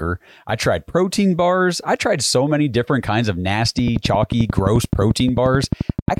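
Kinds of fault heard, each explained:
Train of clicks: from 3.79 s to 6.18 s the speech carries a steady ticking at about 11 clicks per second, some thirty alike pulses peaking roughly 15 dB above the signal, likely interference or a faulty connection; their regular spacing and persistence through pauses distinguish them from a single dropout pop.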